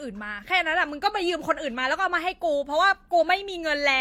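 From start to finish the speech carries two layers of compression damage at once, the likely result of transcoding between lossy codecs, with artefacts pointing to a low-rate HE-AAC encode later re-encoded as Vorbis. The second encoder spends bits reproducing the first one's artefacts, then adds its own. A spectrogram shows a hard ceiling at 16.6 kHz with nothing above it, and patchy, blotchy high bands beneath where detail has been rebuilt or dropped.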